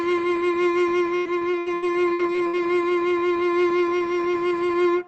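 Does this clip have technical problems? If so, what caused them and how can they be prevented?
Yes. From 1.17 s to 2.79 s the music turns choppy and robotic, the signature of repeated packet loss: nine short holes, the longest 81 ms, are each bridged by stretching the preceding sound, so about a quarter of that span is synthetic. Unlike a single dropout or click, the patches recur in close succession, while the top end stays capped near 8 kHz throughout, as the call codec allows. Prevention: use a steadier network with forward error correction and a deeper jitter buffer.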